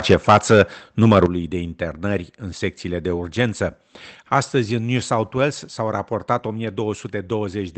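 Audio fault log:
0.1–0.61 s, microphone overload. Peaks run about 9 dB past full scale and lose their tops. Around one sample in twenty is flattened, giving a harsh crackle. Likely an input set too high.
0.14 s, microphone volume stepped down. Level drops by about 4 dB in a single step. Both speech and background fall together, likely the call software reducing the mic input.
1.02–1.25 s, microphone overload. Peaks again exceed full scale, by about 5 dB. Roughly one sample in twenty is clipped, so it crackles just before "de internări în secțiile". Likely excessive input level.
1.26 s, microphone volume stepped down. A sharper drop of about 9 dB hits right before "de internări în secțiile". It follows the distorted peak, likely an automatic input gain cut.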